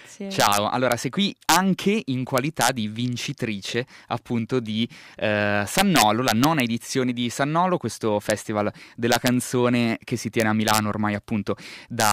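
Integer overflow cracks hit at 0.40–0.92, 1.49–1.56, 2.38–2.69, 5.78–6.60, 8.30, 9.12–9.28, 10.40–10.78 and 12.0–12.12 s. Peaks run about 1 dB over the limit and wrap to the opposite sign. Each one snaps harshly, far sharper than clipping.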